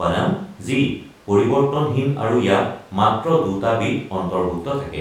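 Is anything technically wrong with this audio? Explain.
No, nothing technically wrong is audible anywhere in this speech recording.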